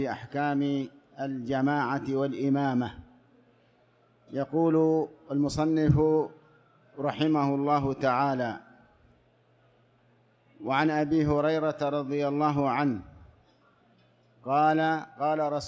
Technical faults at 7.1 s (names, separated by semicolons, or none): none